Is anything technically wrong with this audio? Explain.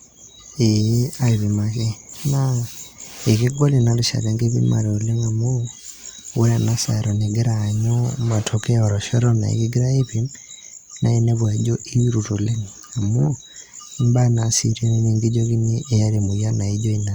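No, nothing technically wrong turns up anywhere in this speech recording.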